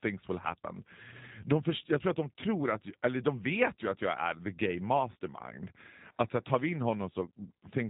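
From start to finish the speech has that G.729 codec sound: nothing above 4 kHz, a slightly rough, synthetic edge where the voice is rebuilt from a vocal tract model and a few pulses per frame, which fits an 8 kbit/s G.729A stream.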